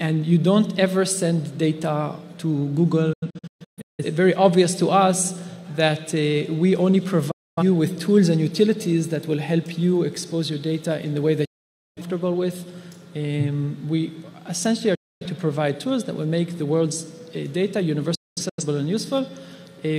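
The sound suffers repeated digital broadcast dropout. The receiver lost valid frames and muted, with quick 8 ms fades each way. From 3.13 to 4.04 s it breaks into several holes, with about 0.6 s missing and the longest gap 0.17 s. Clean gaps follow at 7.31 to 7.63 s, 11.45 to 12.02 s and 14.95 to 15.26 s. From 18.15 to 18.64 s it is scattered again, with a longest gap of 0.21 s. The missing audio never returns.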